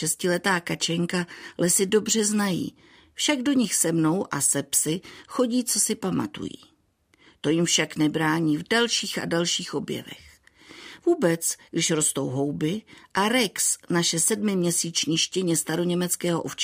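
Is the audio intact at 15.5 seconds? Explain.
Yes, at 15.5 seconds the speech is intact, with no dropout, click, distortion or other fault.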